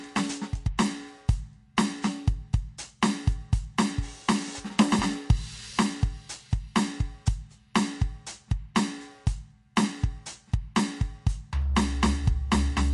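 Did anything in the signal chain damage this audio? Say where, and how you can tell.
Yes. MP3 compression damage runs through the whole music clip, at the codec stage. Nothing is left above 11.3 kHz, where the treble stops at a hard ceiling, and the coding damage is plainly audible from start to finish. The likely cause is an MP3 encoder that ran short of bits, which fits a low bitrate around 48 kbps. To save bits, it cut everything above a fixed frequency and discarded the spectral detail it judged least important.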